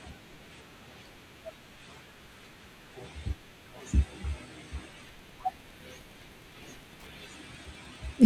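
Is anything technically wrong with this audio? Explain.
Yes. Wi-Fi interference starts at 5.09 s and runs to the end of the clip. A Wi-Fi radio near the audio circuitry sends a beacon every 102.4 ms. The circuit rectifies each burst and turns it into an audible click. The result is a steady ticking at about ten per second behind the speech. It sits roughly 30 dB below the speech, so it is quiet but mechanical and regular.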